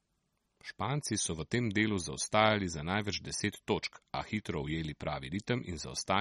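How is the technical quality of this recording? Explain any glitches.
The quality is poor throughout the speech. The audio has nothing above 12.4 kHz and a plainly watery, swirly texture, likely from MP3 compression at a starved bitrate, which fits about 32 kbps. Weak frequency lines flicker between frames, so this is more than a simple treble cut.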